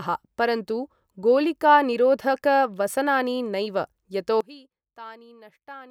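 From 4.41 s to the end, the speech drops by about 22 dB and turns faint. The likely cause is one channel inverted: with one side's polarity flipped, everything shared cancels in the mono sum, leaving just a faint difference signal.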